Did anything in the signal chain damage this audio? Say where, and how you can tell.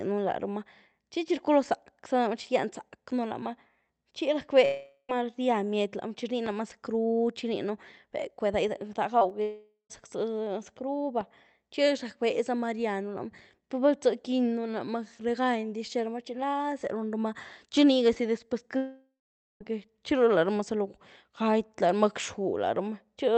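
Yes. The damage is at the network stage of the call, heard as three long network dropouts, at 4.65–5.11 s, 9.42–9.92 s and 18.77–19.62 s (right after "nigazie después"). Each time, the last sound is stretched into a fading buzz, then silence, about 0.12 s of it in the second gap and about 0.48 s in the third. The speech resumes with a chunk missing. Lost packets are the likely cause.

There are also two short concealed packet losses, at 9.19–9.23 s and 9.29–9.32 s. Each is a brief smear of about 20 ms in which the decoder extrapolates the preceding sound and blends back in. Unlike the dropouts, nothing falls to silence, and only about 20 ms of speech is lost each time. Both occur just before the second dropout, through the Opus call path, whose top end is limited to about 8 kHz.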